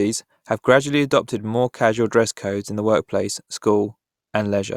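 Listening closely to this recording of speech, nothing stood out as a technical problem at any point.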